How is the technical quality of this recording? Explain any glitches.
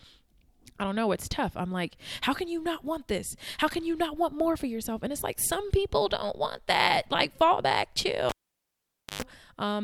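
The recording has one clear glitch near the end. From 8.29 to 9.22 s a live cable is pulled and plugged in again: the broken connection gives a pop, then about 0.88 s of near silence, then roughly 0.11 s of 50 Hz mains buzz as only the plug's tip touches, and another pop when the speech returns.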